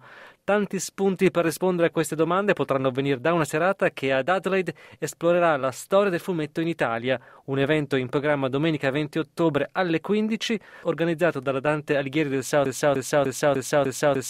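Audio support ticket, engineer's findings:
Broken-record loop from 12.66 s to the end. A 0.3 s fragment repeats back to back, five times. Likely a stalled player or stream resending its last fragment. The audio that should follow is lost.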